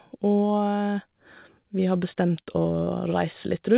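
From 2.42 to 2.88 s the speech breaks up with repeated packet loss, giving a robotic sound. Several short holes, the longest about 40 ms, are patched by stretching the last sound. About a fifth of that stretch is filled this way, so it sounds choppy. Nothing is heard above 4 kHz, which fits a narrowband telephone codec.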